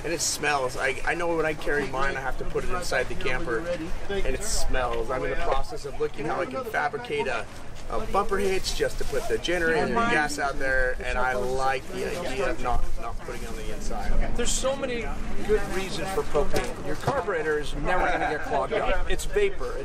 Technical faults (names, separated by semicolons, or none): compressed frames skipped